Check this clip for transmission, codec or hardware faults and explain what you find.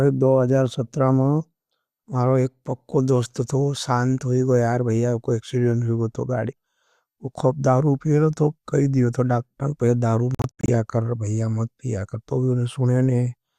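One fault is present: a digital broadcast dropout. Between 10.35 and 10.69 s the speech breaks into several short silent holes, about 192 ms missing in total across roughly 336 ms, the longest gap 72 ms. The receiver muted whenever incoming frames were lost or corrupted, so that audio is gone rather than degraded.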